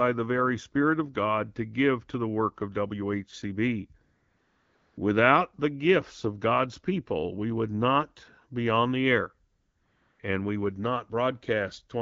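AMR comfort noise appears at 4.03 to 4.97 s and again at 9.51 to 10.19 s, after "be on the air" and before "and we would". The sending phone treated each gap as silence and stopped transmitting speech frames. The receiver filled the 940 ms and 680 ms pauses with a smooth, steady synthetic hiss built from a rough level and spectrum estimate, so the real background drops out and switches back in abruptly.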